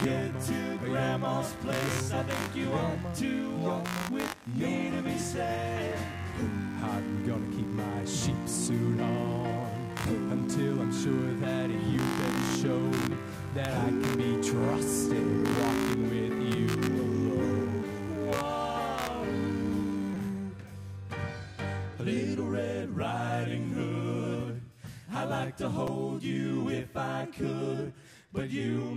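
From the top through about 20.3 s there's computer activity noise: a buzzy, chirpy pulsing at roughly 70 Hz, sitting around 15 dB below the sound. The computer's processor, graphics or mouse load is shifting the shared ground under the audio circuit, so the buzz follows what the machine is doing rather than anything in the audio itself. Then it just stops.

Right around that cutoff, at 20.14 s, there's a repeated buffer. A tiny 5.8 ms chunk, which fits a 256-sample buffer, plays three extra times because fresh audio didn't arrive in time. Each repeat butts up against the last with a hard join, so it comes across as a quick click-buzz. It happens again at 25.87 s, with two extra plays. Both are brief stalls rather than dropouts, since no audio goes missing.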